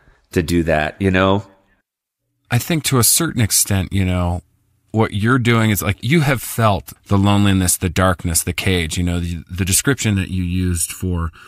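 From 10.13 s to the end at 11.48 s, the speech turns hollow and phasey from channel delay (comb filtering). One channel lags by under a millisecond before the mono sum, cancelling frequencies from around 700 Hz upward at regular intervals, which shows on a spectrogram as evenly spaced dark horizontal bands.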